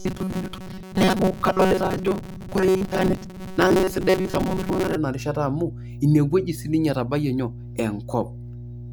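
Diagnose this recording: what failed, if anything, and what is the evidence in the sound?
Mains hum sits in the analogue wiring stage: a steady 60 Hz tone runs under the whole speech clip, around 15 dB below the speech. On a spectrogram it is a thin, unbroken horizontal line at 60 Hz. The likely mechanism is a ground loop or nearby transformer leaking power-line current into the signal path.

Robotic sound from repeated short buffers affects 0.01 to 4.96 s. The speech becomes a rigid metallic buzz at 188 Hz while still loosely tracking the syllables. This points to a driver or buffer stage starved of audio, likely replaying a segment of about 5.3 ms in place of around 70 percent of the real signal. A spectrogram shows evenly spaced harmonics of 188 Hz, and the waveform shows identical short cycles repeating.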